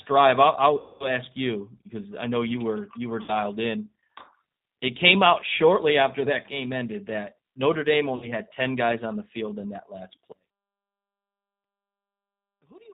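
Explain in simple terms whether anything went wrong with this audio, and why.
Yes, several things went wrong. Throughout the speech, the G.729 codec is plainly audible. This phone-line codec rebuilds the voice from a simplified model of the throat and a few pulses every few milliseconds, and discards everything above 4 kHz. The result sounds narrow, slightly rough and synthetic.

There are three short dropouts from VoIP packet loss concealed by the speech codec: 0.80 to 1.09 s, 3.22 to 3.32 s and 8.16 to 8.32 s. The first gap is about 200 ms of missing audio and the others about 60 ms each. The decoder guessed by stretching the last bit of voice, which is why it fades, then sounds weak for a moment after the gaps.

From 10.32 s to the end, the voice almost disappears, leaving only a faint trace. The likely cause is one channel inverted: one side of the stereo signal was flipped upside down, so the two sides cancel each other when mixed to a single speaker.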